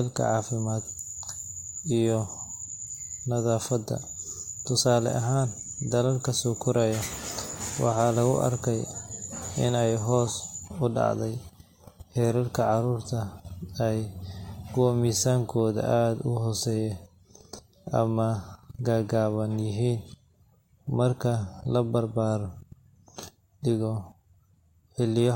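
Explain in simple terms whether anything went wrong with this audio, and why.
Nothing went wrong with this audio, because no part of it has any fault to point to.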